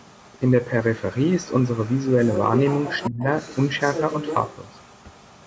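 From 1.43 to 2.44 s and again from 2.68 to 4.56 s, the other side's voice is leaking through, likely echo the canceller left behind: faint at about 25 dB down, then about 10 dB below, showing as a second, weaker harmonic pattern on the spectrogram. At 3.09 to 3.26 s the speech is suppressed in double talk, likely the canceller ducking both voices: the waveform dips roughly 30 dB and the spectrogram briefly goes nearly blank.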